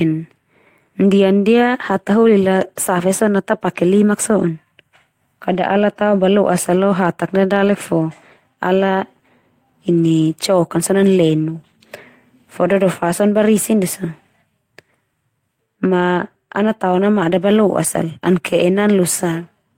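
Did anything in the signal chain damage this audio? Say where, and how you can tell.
No, nothing damaged this audio.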